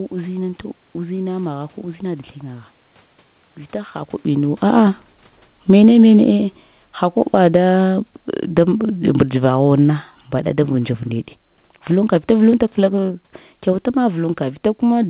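From 4.25 s to 10.63 s the level sinks steadily by about 10 dB. This is automatic gain falling. The gain control judged the input too loud or its background noise too strong and pulled its gain down slowly. Just before, near 4.0 s, the talker moves relative to the microphone. The room noise sinks along with the speech. The same slow slide returns at 12.15 s and runs to the end. The call codec band-limits the speech below 4 kHz.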